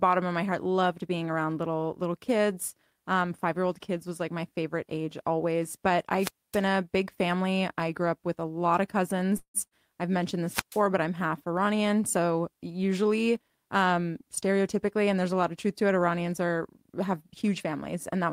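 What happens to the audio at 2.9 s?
Nothing goes wrong at 2.9 s; the audio runs through that moment intact, with no dropout, click, distortion or other fault to be heard.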